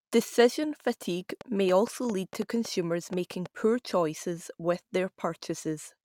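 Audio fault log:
1.30 to 3.47 s: train of clicks, likely from interference or a faulty connection injecting short pulses into the signal path, heard as roughly ten similar pops at an uneven pace of about 4.6 per second, peaking around 5 dB above the speech and ending just before "poor choices with".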